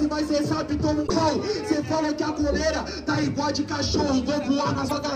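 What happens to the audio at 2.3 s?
Nothing goes wrong at 2.3 s: the audio carries straight through that moment with no dropout, glitch or other fault.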